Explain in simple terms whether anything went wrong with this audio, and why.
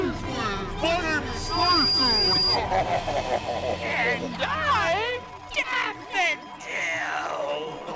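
A loudspeaker feedback squeal starts at 1.26 s and lasts until 2.58 s: a single high whistle near 4.8 kHz swells over about half a second until it is louder than the sound itself. That gradual build-up distinguishes it from a steady interference tone.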